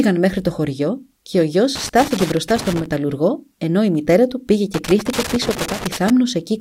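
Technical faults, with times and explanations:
1.75–2.86 s and 4.74–6.10 s, loose connector crackle: two irregular bursts of crackle and scratching, about 1.1 s and 1.4 s long, overlaid on the speech. A worn or dirty contact was repeatedly making and breaking as it moved, chopping the signal on and off at uneven intervals. On a waveform the envelope looks broken up, with abrupt dropouts and jagged steps. On a spectrogram the bursts appear as scattered, unevenly spaced vertical broadband streaks across both spans.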